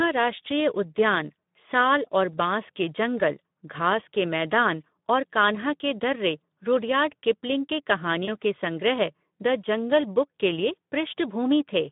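Throughout, the speech sounds hoarse and grainy and noisy, with a narrow band running from about 150 Hz to 3.7 kHz. This is Speex codec damage, clearly audible and consistent with a low setting around 11 kbps, where too few bits go to the excitation signal.

At 2.32 to 2.38 s and again at 8.25 to 8.28 s, the speech briefly smears into a fading buzzy tone or coloured noise and then sounds weak for a moment. This is VoIP packet loss concealed by the speech codec. The gap fits a single lost 20 ms frame, which the decoder filled by stretching its last pitch and filter at falling gain.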